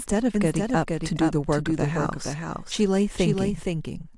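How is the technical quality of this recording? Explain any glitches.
The recording has one clear fault, a doubled audio track, present from start to finish. A second copy of the speech runs about half a second behind, roughly 5 dB quieter. It is dry and full-band, with no room tail. This is likely a second capture path or an edit holding two misaligned copies. Each phrase is heard again as a distinct, flat echo.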